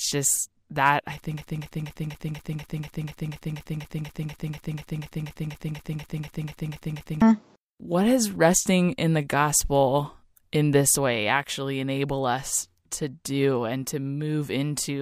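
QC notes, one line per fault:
1.37–7.22 s, broken-record loop: right after "just that I", a 0.24 s fragment repeats exactly, back to back, 24 times for nearly six seconds, and the speech that should have played there never arrives. The likely cause is a stalled player or stream resending its last held fragment. Unlike a brief stutter or an echo, every repeat is identical and undecayed, and nothing new is heard until the loop breaks.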